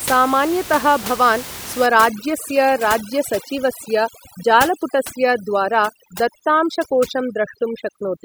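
From 1.86 s to the end of the clip at 8.24 s, the speech is affected by overdone noise removal. The suppressor is set too aggressively, so individual frequency bands close to its noise estimate are cut hard or gated off, and low-level parts of the speech are removed along with the room noise, which sits about 13 dB below the speech. The background in the gaps between phrases drops and breaks up into scattered twinkling specks.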